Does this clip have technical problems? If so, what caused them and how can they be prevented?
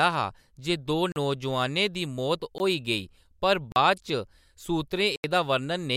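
Yes. Speech drops out in four blocks of digital silence: 1.12 to 1.16 s (40 ms) just after "हा जे दो", a short 17 ms gap at 2.58 s, 3.72 to 3.76 s (40 ms), and 5.16 to 5.24 s (80 ms). Each time the sound cuts out and returns with no fade, and the longer gaps are heard as holes. The usual cause is a playback or processing stage missing its deadline to fill the output buffer. Prevent it by enlarging the buffer or raising the audio thread's priority, so every block is ready before it is due.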